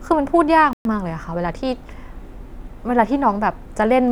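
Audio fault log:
0.73–0.85 s, playback stall: the speech cuts out mid-flow and leaves about 120 ms of dead silence before the sound resumes. It picks up again rather than simply fading, so the gap reads as an interruption in delivery, not a pause in speaking. The likely cause is the player running short of buffered data, or its output thread being held up, so nothing reached the output until it recovered.
0.85–1.65 s, time-compressed catch-up: straight after the gap the speech runs hurried, about 1.15 times normal speed, yet the pitch stays where it was. To work off the backlog left by the stall, the player is trimming out short slices of audio and cross-fading across the joins. That shortens the timeline without resampling, which is why the pace rises while the pitch does not.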